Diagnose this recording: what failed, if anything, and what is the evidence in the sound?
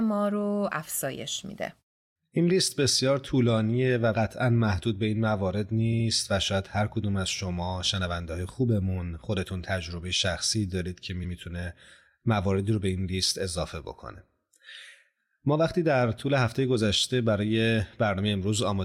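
The speech stutters twice, replaying a short stretch as if it skipped back. At 5.92 to 6.06 s a block of about 70 ms plays twice more, which fits three compressed frames. At 11.23 to 11.33 s a block of about 93 ms plays once more, which fits four frames. This is repeated frames at the codec or storage stage: frames were written or sent more than once and decoded again, lengthening the audio by about 0.23 s.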